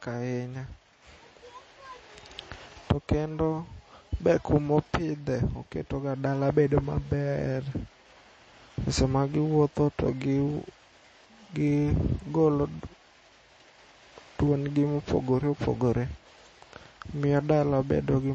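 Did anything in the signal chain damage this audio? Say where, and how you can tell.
Yes. Throughout the speech nothing reaches above 8.4 kHz, and the sound is plainly watery and swirly, so the damage is at the codec stage: likely MP3 compression, at a bitrate around 32 kbps. A plain low-pass filter would cut the treble without this flickering.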